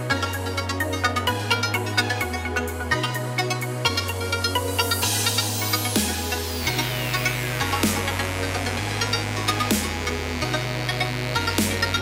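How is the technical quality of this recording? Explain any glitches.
A fault appears partway through. From 6.6 s to the end, a steady, raspy mains buzz sits fairly loud under the sound. Sharp switching spikes, twice per 50 Hz cycle, are leaking in, probably from a dimmer, rectifier or missing shield, and their harmonics reach well into the kilohertz range.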